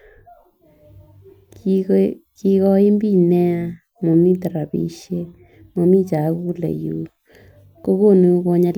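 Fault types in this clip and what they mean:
No faults can be heard anywhere in this recording.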